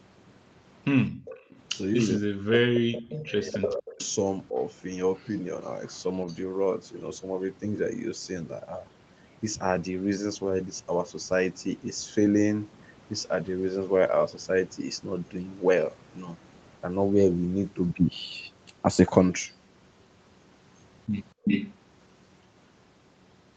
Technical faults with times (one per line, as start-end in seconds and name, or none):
1.11-1.25 background gated by the echo canceller
1.25-2.18 echo leak
1.96-4.58 speech suppressed in double talk
2.75-3.25 echo leak
3.98-4.09 echo leak
5.15-6.37 echo leak
21.44-21.74 echo leak